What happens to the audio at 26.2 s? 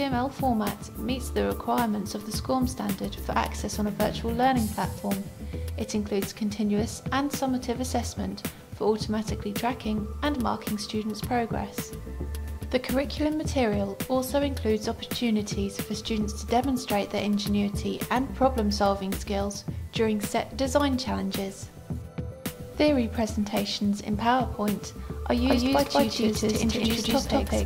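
At 26.2 s the sound is doubled: from 25.37 s to the end, a second copy runs about a fifth of a second behind at roughly equal loudness, likely from a second capture path or a misaligned edit. Unlike an echo, it has no decay or room colour, and it starts abruptly.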